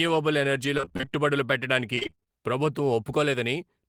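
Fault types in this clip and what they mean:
Repeated packet loss (robotic sound): lost packets patched by extending prior sound, making speech choppy and robotic at 0.77–1.13 s and 1.95–2.28 s, roughly half concealed.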